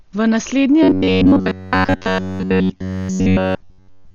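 Throughout, the speech sounds dull and rough, with a hard spectrogram ceiling, most likely heavy Dolby Digital compression at a very low bitrate. From 0.83 s to the end, all the sound becomes a rigid metallic buzz at 93.8 Hz, likely from repeated short buffers about 11 ms long. On the waveform, this shows as near-identical repeating cycles.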